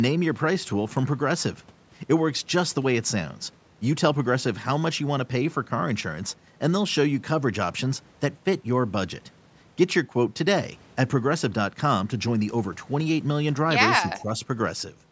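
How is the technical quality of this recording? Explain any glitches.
Two brief call-processing glitches near the end of the speech, both within the last second and a half of an audio band that stops at 8 kHz.

From 13.9 to 14.01 s there is an echo leak. The far end's echo canceller likely failed to remove everything its microphone picked up from the loudspeaker, so a residue travelled back down the line. You hear a faint delayed copy of the speech, trailing the original by about 162 ms and sitting roughly 10 dB below it, as a short ghostly scrap.

From 14.14 to 14.29 s the speech is suppressed in double talk. With both ends sounding at once, the echo canceller likely could not tell the near talker from loudspeaker echo and turned everything down. For about 150 ms the speech dips, by roughly 10 dB at the deepest point, sounding briefly pulled back before recovering.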